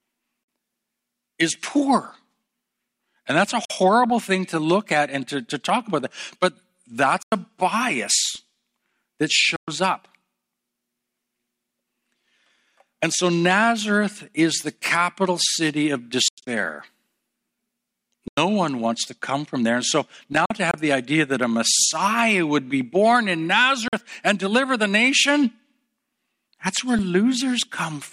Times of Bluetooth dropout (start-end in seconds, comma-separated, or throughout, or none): 0.43-0.48, 3.65-3.70, 7.23-7.32, 9.56-9.68, 16.28-16.47, 18.28-18.38, 20.45-20.74, 23.88-23.93